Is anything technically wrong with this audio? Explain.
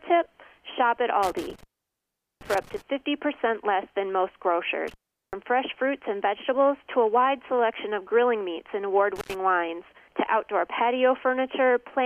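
Yes. Intermittent contact at 1.23–2.82 s, 4.88–5.33 s and 9.16–9.35 s: a loose connection opens for 0.78 s, 0.39 s and 86 ms, so the sound drops to faint hiss with crackle at each break.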